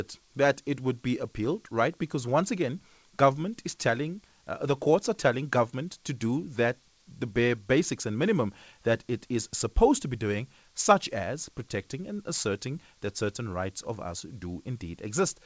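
Listening to the speech, nothing stood out, and the only thing to note is that the call path carrying it leaves nothing above 8 kHz, which fits a wideband codec such as G.722.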